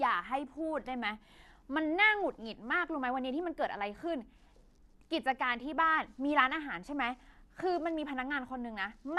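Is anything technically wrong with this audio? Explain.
Yes. Throughout, the speech has nothing above about 12.2 kHz and a dull, gurgling, granular edge, likely MP2 compression at a rate that fits around 80 kbps: with too few bits, the upper sub-bands get switched off and the remaining ones are coarsely quantised.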